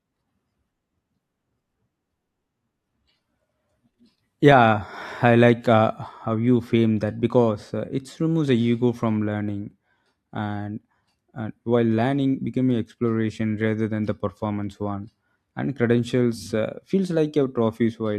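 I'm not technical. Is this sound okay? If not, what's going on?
Yes, the recording is technically sound, with nothing in the signal that needs fixing.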